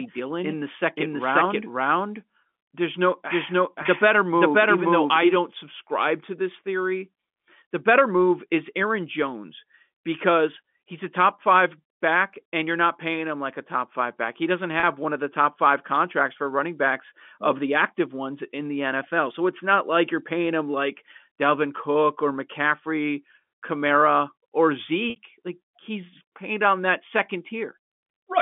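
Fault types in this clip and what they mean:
Doubled audio track: The speech is heard twice from the very start. A second full-band copy trails about half a second behind and is about as loud as the first. It adds no decay or room colour, so it sounds like a second stream, not an echo. The likely cause is the same audio being captured again through a slower path. The copy cuts off abruptly at 5.36 s, just before "subscribe to this theory".
Packet loss with pitch repetition: Three short dropouts were bridged by repeating the last pitch period. At 3.83 s a 20 ms gap gives a brief held buzz. From 14.80 to 14.83 s a 30 ms gap does the same, just before "one of the top". From 25.10 to 25.16 s a 60 ms gap holds and then fades before the speech returns. The gap lengths fit 10 ms packets.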